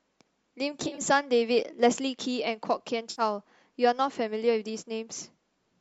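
A speech recording with two stretches of AAC frame loss with concealment, at 0.80 to 1.06 s and 3.11 to 3.22 s. In the first, brief dropouts scatter across about a quarter second, the longest only a few tens of milliseconds. The second loses roughly 70 ms in all, which fits about seven 10 ms frames. In each, the decoder rebuilds missing frames from the last good spectrum, so the speech turns smeared and noisy. On a spectrogram these patches show as blurred, hazy columns where harmonic lines lose their fine structure. The waveform there looks rough and structureless against the surrounding speech. The faint, even graininess heard throughout is likely light low-delay AAC coding at a moderate bitrate.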